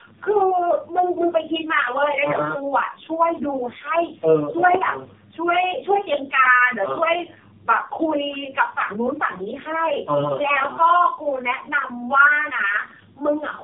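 Tandem speech coding runs through the entire speech recording: the call passed through three low-rate speech coders in a row, with plain telephone-grade links between them, so it was decoded and re-encoded at each border. The character fits AMR-NB, with the lowest stage around 7 kbit/s. Each coder added its own damage on top of the last, leaving speech rough, muffled and warbly, with nothing above 3.6 kHz.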